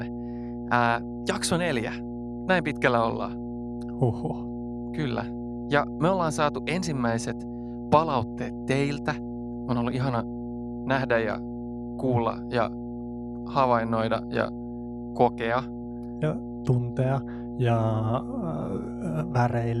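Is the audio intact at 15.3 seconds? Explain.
No. At 15.3 seconds the speech sits on a steady low drone at 60 Hz, fairly loud and not far below the speech itself, with a slightly buzzy edge from its low harmonics. This is mains hum, and it runs through the whole clip, not just this moment. It comes from the power line coupling into the signal, through a ground loop in the cabling or from a transformer close to the recording chain.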